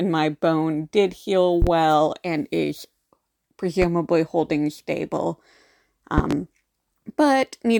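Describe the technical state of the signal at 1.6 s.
A loud pop, two in fact, lands between 1.62 and 1.71 s, after "my bone did heal" and before "and is". They rise about 15 dB above the speech, which continues underneath. A voltage spike, likely from a plug or switch, caused them.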